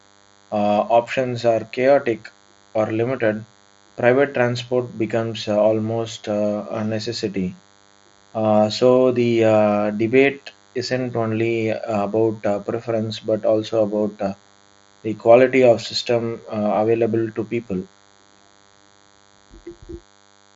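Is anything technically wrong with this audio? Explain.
Yes. A DECT cordless phone buzz runs under the speech for the whole clip: a steady, thin, rasping hum at 100 Hz with a dense stack of harmonics, sitting about 35 dB below the speech. A nearby DECT handset or base station transmits a short radio burst every 10 ms, and the audio circuitry rectifies those pulses into sound at that rate. The buzz stays within the headset-codec band, which tops out near 7.7 kHz.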